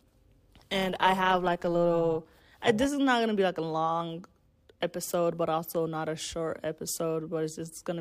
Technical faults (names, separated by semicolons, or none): overlap-add ripple